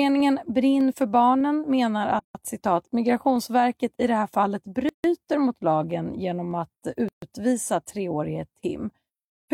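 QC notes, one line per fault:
0.20 to 9.06 s, clock drift buffer slips: a click recurs every 0.6 s across the speech, about fifteen in all. The steady spacing suggests the likely cause is two devices running on separate clocks that disagree by a few hundred parts per million. The buffer between them drifts until a block of a handful of samples is dropped or repeated, and that discontinuity is what clicks.
2.19 to 2.35 s, 4.89 to 5.04 s and 7.09 to 7.22 s, gap at a join of encoded pieces: the speech breaks off in gaps of 155 ms, 151 ms and 139 ms, then resumes from where it left off. Each gap marks a join between separately encoded segments that were spliced without trimming. The encoder's start-up delay and the padding of the final frame both remain as silence. The codec smears the edges, so the silent part is shorter than the gap.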